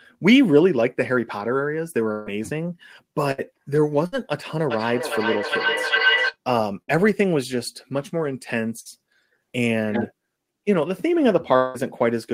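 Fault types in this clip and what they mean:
Burst of packet loss: Short runs of lost packets, each concealed by stretching the last sound into a fading buzz or hiss, then skipping ahead. Heard at 2.11, 3.31, 4.06, 6.82 and 8.80 s; the first loses 120 ms, the rest 60 ms. Spectrograms show smeared, decaying harmonics ending abruptly.
Feedback howl: A microphone-to-loudspeaker loop gaining level each pass, building from 4.70 to 6.37 s into a tone near 1.5 kHz, reaching about the speech level and pulsing roughly every 0.4 s. A spectrogram shows one bright horizontal line; the waveform swells periodically.
Long network dropout: A longer stretch, 11.56 to 11.77 s, where about 180 ms of audio is missing and the gap is filled with a decaying continuation of the last sound. The likely cause is a network outage. The waveform shrinks into a fading tail before speech resumes.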